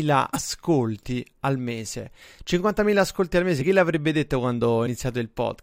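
Compressed frames skipped: whole frames never reached playback, so the speech jumps forward, roughly a tenth of a second at 0.33 to 0.42 s, about 50 ms at 3.60 to 3.64 s between "ascolti al" and "chi l'avrebbe detto", and about 70 ms at 4.86 to 4.88 s after "chi l'avrebbe detto".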